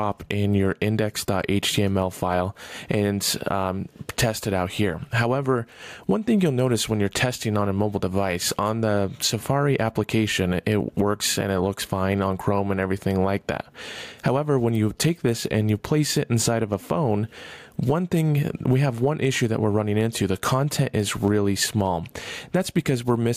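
Gain pumping throughout, likely excess gain into a fast limiter: gain swings about 15 dB around loud sounds; waveform looks flattened.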